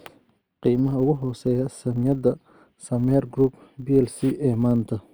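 All the way through this speech clip there's a filter restarted on every block: it drops its state at each boundary and starts from silence, so each block opens with a little transient. That gives a 100 Hz buzz riding the speech level, which fits 10 ms blocks.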